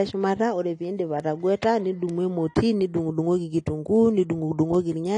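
Throughout the speech, nothing is present above about 10.1 kHz, and low-bitrate smearing remains. This is likely low-bitrate audio saved at a high bitrate, so the re-encode cannot restore the missing detail. Bit error spikes occur at 1.20 s just after "ore piindip", at 2.09 s just before "emoti nidung'udung'oki", and at 4.75 s. Each is a single flipped-bit sample that jumps and returns, heard as one sharp broadband tick unrelated to the signal.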